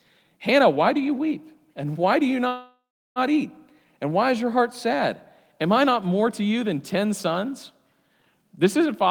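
At 2.47 s, after "why do you", the sound smears into a fading buzz, goes silent, then resumes intact at 3.19 s: a call audio freeze, likely from delayed packets emptying the jitter buffer.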